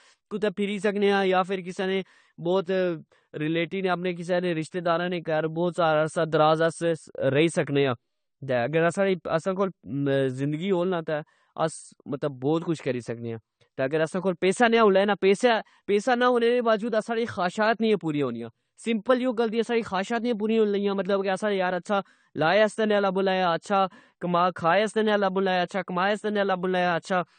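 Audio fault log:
Throughout: AAC compression. The speech sounds dull and smeared, with nothing above 9 kHz and a plainly audible swirling, fizzy texture on sibilants and held vowels, which fits a bitrate near 32 kbps. This is likely AAC-LC coding quantising each frame's spectrum coarsely and lowering its cut-off. A simple low-pass filter would only darken the sound; here the remaining band also warbles and fizzes, which comes from the coding itself.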